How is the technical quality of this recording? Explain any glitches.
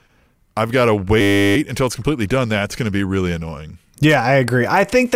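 The recording has one clear glitch, a system hang loop from 1.21 to 1.56 s, between "I've got to" and "until it's completely done". The computer or audio driver stalled while the sound hardware kept replaying the same 10 ms stretch of its buffer, roughly 35 times over. Because the loop is so short, it doesn't stutter. It fuses into a steady 100 Hz buzz lasting about a third of a second, after which the speech resumes with little or nothing missing.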